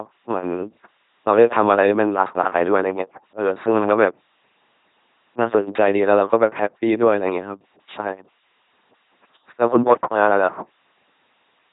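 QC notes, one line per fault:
Throughout, LPC-10 vocoder: the speech comes out as a buzzing, mechanical robot voice. Each frame drives a simple vocal-tract filter with either a pulse train or noise, so voicing is all-or-nothing. The heavy damage fits a 2.4 kbit/s rate, and nothing remains above about 3.8 kHz.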